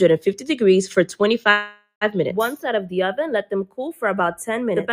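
From the start, the two channels drift apart. They run on clocks that disagree by around 20 ppm, so the delay between them slowly grows to a fraction of a millisecond by the end. Summed to mono, this gives a slow flanging as comb notches creep through the spectrum. On a spectrogram of the mono sum, thin dark bands glide gradually downward in frequency.

Also present throughout is a noise suppressor applied to music or sounds. A processor built for speech treats sustained tones, ambience and decay tails as noise and pulls them down, swinging gain by roughly 5 dB. Onsets pass, but held material sinks, so the sound pumps and thins. The waveform envelope shows ducking dips just after each attack. The spectrogram shows tails and background cut short, with blotchy, gated-looking low-level regions.

From 1.51 to 2.04 s comes a call audio freeze, likely caused by delayed packets leaving the jitter buffer empty. 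The receiver stretches the last sound into about 500 ms of decaying buzz or hiss, including roughly 90 ms of silence. Playback then resumes where it stopped, with nothing lost, so everything after this point arrives half a second late. The spectrogram shows a smeared, repeating texture fading into a blank strip. The waveform shows a tapering repetitive stretch, then near-zero amplitude.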